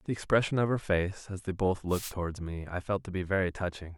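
A speech recording carried over an analogue FM wireless microphone suffers a wireless microphone noise hit from 1.88 to 2.13 s. For that quarter-second the radio link fades, as reflected copies of the transmitted signal arrive out of phase and cancel at the receiver antenna. With the carrier weakened, the receiver's own noise floor surges up, heard as a brief swish of static before the signal recovers.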